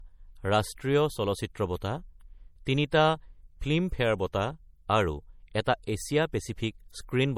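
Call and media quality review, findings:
Speech, whole clip: smeared, swirly MP3-type artefacts despite high file bitrate; spectrum empty above 19.5 kHz. Likely low-bitrate audio saved at a high bitrate. Pattern fits a 48 kbit/s MP3 re-encoded at about 281 kbit/s. Re-encode cannot restore what the first pass discarded.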